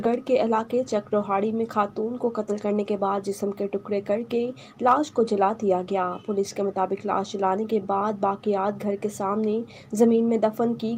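Nothing stood out as a technical fault on listening to the clip.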